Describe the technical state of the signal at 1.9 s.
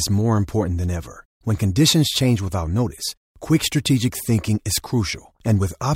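Sample clock jitter spans 0.34–2.95 s, ending before "quick strategic thinking is". An unsteady converter clock mistimes steep speech slopes, adding hiss that appears as high-frequency spectrogram haze.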